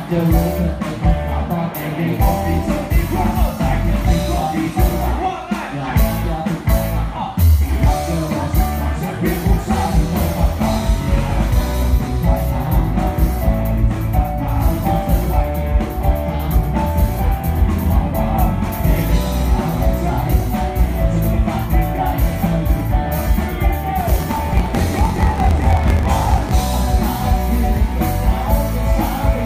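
From 23.99 s to 26.68 s the audio shows a block size mismatch (truncated). One stage writes blocks longer than the next stage reads, which fits 1024-sample blocks being written, and the tail of each block is discarded. The result is a 45.9 Hz buzz, with the sound running 1.07 times faster at roughly unchanged pitch. A waveform shows regular splice discontinuities about 22 ms apart, and a spectrogram shows matching vertical striations with a buzz line near 46 Hz.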